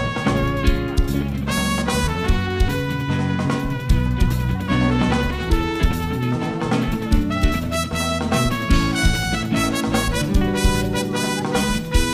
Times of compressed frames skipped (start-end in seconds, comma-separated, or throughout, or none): none